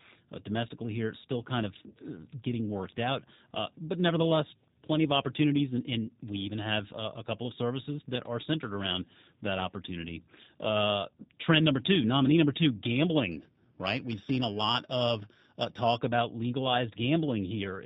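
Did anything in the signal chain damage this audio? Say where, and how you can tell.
Yes. The codec stage did the most lasting harm. Across the whole speech clip the band stops at 4 kHz, and the sound has a rough, slightly synthetic texture. That points to G.729 at about 8 kbit/s, here the G.729A variant. This codec rebuilds each 10 ms frame from a vocal tract model, a pitch predictor and a few pulses. The original waveform is discarded, and the damage is plainly audible.

The converter adds a second fault, periodic clock jitter, from 13.32 to 15.98 s. In that span the speech gains a metallic, rough edge that drops out during pauses. The clock was being shaken at a steady rate of about 2 kHz. Each component of the sound then picks up sidebands at that spacing above and below it, and the high frequencies suffer most. Because the edge stops in silence, the fault lies in the sampling clock and not in added noise.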